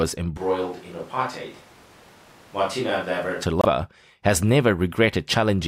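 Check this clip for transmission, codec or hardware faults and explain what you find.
Two faults are audible. From 0.38 to 3.42 s the close microphone likely dropped out for a distant microphone, so speech turns roomy and hollow, about 5 dB quieter, with room noise about 25 dB below it. From 3.61 to 3.65 s a likely broken MP3 bit reservoir, with frames lost and the next one decoding borrowed bytes, makes the audio jump ahead briefly, which fits 24 ms frames.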